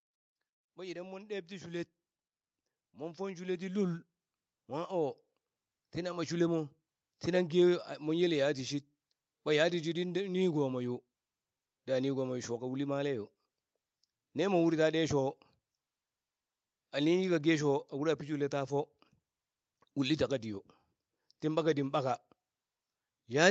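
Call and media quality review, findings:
Automatic gain rising, 0.75 to 6.31 s. Probable component: the call's automatic gain control, which judged the input too quiet and pushed its gain up step by step, about 15 dB in total. Symptom: speech and background noise swell together over those five-plus seconds. Band limited at 8 kHz throughout, so the swell stays within the call path's frequency range.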